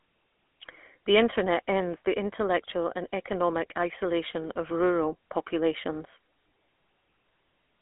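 From start to end the speech has the GSM full-rate codec's plainly audible buzzy, gravelly grain, which fits a 13 kbps stream driven by coarse pulse excitation. A plain telephone band-limit (250 Hz to 3.4 kHz, nothing above 3.8 kHz) would only thin the sound. This also roughens its texture.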